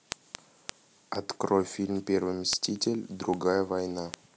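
From 0.12 s to 4.25 s the speech carries word clock ticks, about ten a second, some forty sharp clicks of uneven strength. The receiver isn't locked to the sender's clock, and the pattern points to a drift of roughly 500 ppm, slipping one sample at each tick.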